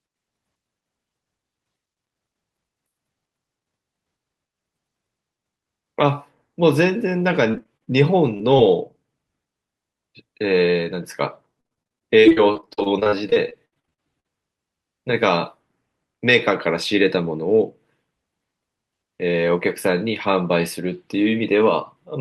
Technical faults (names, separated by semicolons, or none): repeated packet loss (robotic sound); short concealed packet loss